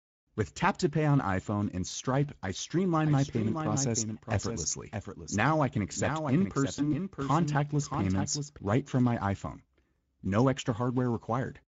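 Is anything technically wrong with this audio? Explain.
Yes, there are several faults.

Speex codec, throughout: this low-bitrate CELP speech codec spends too few bits on the excitation signal, which fits a rate near 16.8 kbps. The damage is plainly audible. The speech sounds noisy and hoarse.

Overlapping chunks, at 1.91–1.94 s, 5.94–5.96 s and 9.96–9.99 s: the audio was handled in 4-second chunks, each starting before the previous one ended. At every join a 25 ms slice plays twice, heard as a regular click or stutter.

Doubled audio track, from 2.94 to 8.59 s: a second, full-band copy of the sound runs around 0.7 s behind the original and about 5 dB quieter. It likely comes from a slower second capture path or from misaligned copies in an edit. It has no reverberant decay and starts and stops abruptly.

VoIP packet loss concealed by the speech codec, at 6.76–6.94 s: one 20 ms packet went missing. 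The decoder extrapolated from its last pitch and filter state with falling gain, stretching the sound into a buzzy tone or coloured noise. Because each frame builds on the previous one, the speech stays weakened or distorted after the gap.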